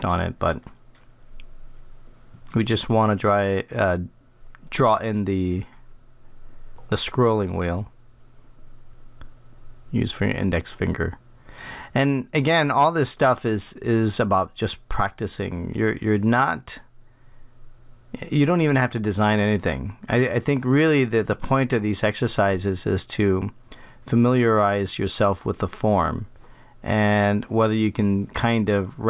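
Nothing in the audio stood out as a fault on listening.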